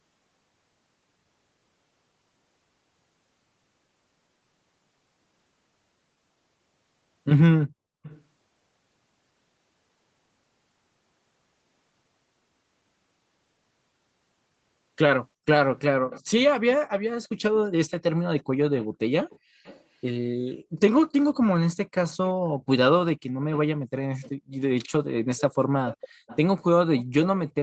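From 8.03 to 8.23 s, 15.77 to 19.84 s, 21.7 to 22.33 s and 23.53 to 27.05 s, a faint second copy of the speech trails the original by about 370 ms, at about 20 to 25 dB below it. This is an echo leak, likely from a loudspeaker at the far end whose echo canceller let part of its microphone pickup return. Unlike room reverberation, which smears sound continuously, this is a distinct repeat at a fixed lag, heard only in stretches.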